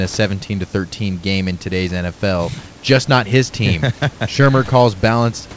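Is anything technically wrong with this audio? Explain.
No, nothing is technically wrong with this audio.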